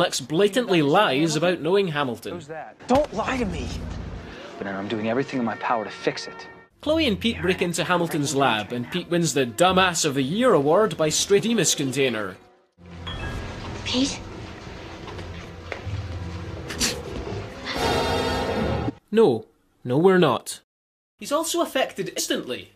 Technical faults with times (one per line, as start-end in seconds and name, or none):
4.60 damaged data in a compressed stream
11.38-11.40 damaged data in a compressed stream
13.38 damaged data in a compressed stream
18.88-18.90 damaged data in a compressed stream
22.18 damaged data in a compressed stream